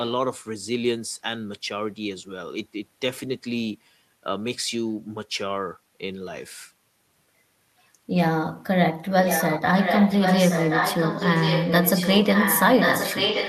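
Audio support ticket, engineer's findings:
Echo leak, 9.24 s to end: speech repeated 1.08 s later, about 5 dB quieter than the original. Likely far-end echo canceller not removing loudspeaker pickup.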